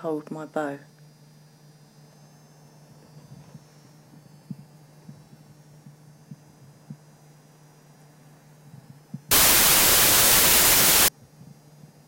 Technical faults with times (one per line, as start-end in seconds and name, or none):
9.31-11.08 wrong sample width